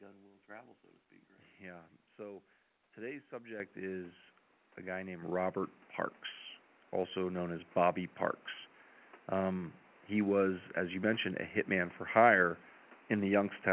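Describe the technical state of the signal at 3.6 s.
At 3.6 s, just before "is a guy named", the microphone volume steps up by about 8 dB as the call software raises the input gain in one jump. Speech and room noise rise together, so the waveform envelope and the spectrogram's whole band below 4 kHz brighten at once.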